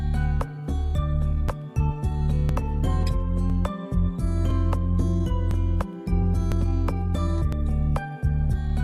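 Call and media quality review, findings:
Overlapping chunks. Short click or stutter about once a second, from 0.48 s to 8.53 s, nine joins in all. At each join, 6.5 ms of sound plays twice. Chunking stage: each 1.0 s block starts before the previous one ends.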